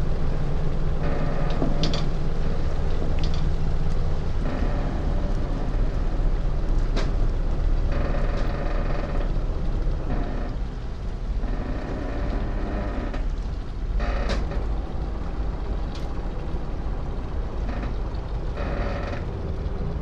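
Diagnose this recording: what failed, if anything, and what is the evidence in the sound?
Doubled audio track from the start to 8.48 s: a dry copy trails about a second and a half behind, about 10 dB quieter, and stops abruptly, likely from a slower second capture path.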